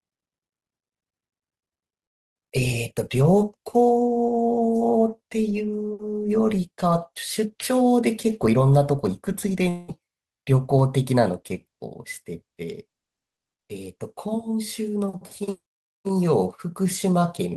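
In this speech recording, from 9.69 to 9.90 s the sound smears into a fading buzz and about 200 ms of speech is lost, likely a long network dropout concealed by the receiver.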